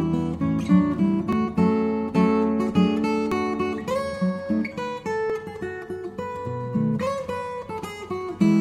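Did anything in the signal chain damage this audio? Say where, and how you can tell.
Yes. Tiny skips at 1.33, 3.32, 5.30 and 7.29 s, about 2 s apart, point to overlap between stream segments. The player trims roughly 10 to 20 ms where segment timestamps collide.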